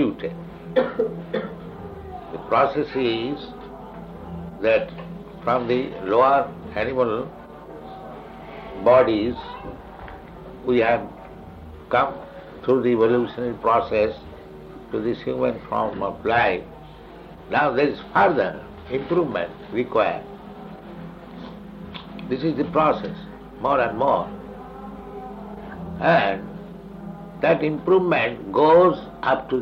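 Nothing technically wrong can be heard in this audio. The sound stays steady throughout, with no event that needs a time or a cause.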